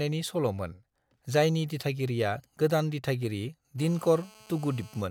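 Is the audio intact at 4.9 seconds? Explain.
No. At 4.9 seconds you're in the middle of a GSM phone buzz that runs from about 3.79 s, right after "जायनि दिथागिरिआ गोदान दिथागिरि", to 5.02 s. A 2G phone was on a call nearby, and its radio bursts got rectified in the audio circuitry. That gives a hard, raspy buzz at about 217 Hz with lots of harmonics, holding steady, sitting about 26 dB below the speech, and completely unrelated to it.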